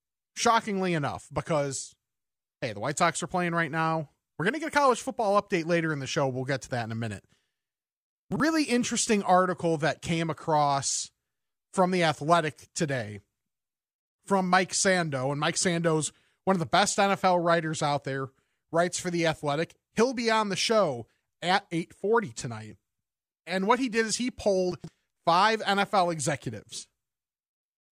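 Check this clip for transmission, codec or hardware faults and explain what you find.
Two short spots of chunks out of order affect this speech, at 8.32 to 8.40 s, just before "interesting article that came", and at 24.72 to 24.88 s, right after "he did is he". In each, a 40 ms block of audio reached the output late and was played after blocks that should have followed it. The first fits a displacement of one block, the second of three. Nothing goes missing, but the sequence is scrambled, leaving three hard joins around a brief jumbled moment.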